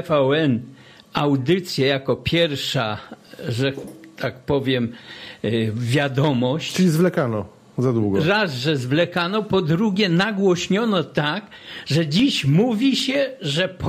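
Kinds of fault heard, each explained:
Clock drift buffer slips: A regular click recurs every 2.23 s from 1.04 s to 12.2 s, about seven in all, and is likely caused by two devices running on separate clocks that disagree by a few hundred parts per million. At each slip a short block of a few dozen samples is dropped or repeated. The waveform shows a small step where the signal jumps, and the spectrogram shows a thin broadband vertical line at each one.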